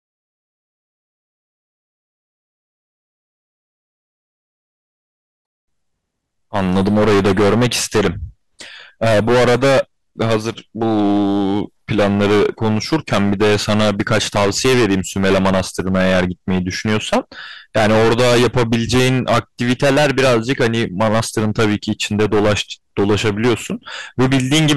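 Hard clipping runs the whole way through this speech: the level going in sits about 20 dB above what the stage can pass, so roughly a sixth of the waveform gets squared off flat. That throws harsh upper harmonics everywhere, leaving a constant gritty fuzz on every loud syllable.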